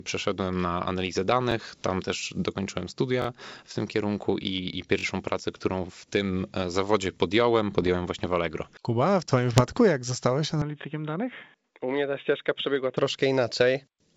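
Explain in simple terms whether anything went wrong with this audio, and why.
Repeated buffer, at 1.52–1.54, 3.22–3.26 (right after "też dokończyłem"), 4.99–5.04 and 10.82–10.84 seconds. New audio arrived late, so the player replayed its last chunk of about 21 ms once or twice. This causes a quick stutter or buzzy click, with no speech lost.

Bit errors on an ADPCM link, at 7.82–7.88 and 9.53–9.80 seconds (the second right after "w twoim", before "jak zostałeś"). Corrupted bits throw the decoder off for a few milliseconds each time, producing pops, rough bursts and brief jumps in loudness.

From 10.62 to 12.97 seconds, starting just after "jak zostałeś", the speech turns dull and boxy. Nothing is heard above 3.8 kHz, and a faint new background noise appears, with no gap and no change in loudness. This is likely an input switched to a poorer device, such as a headset's call mode.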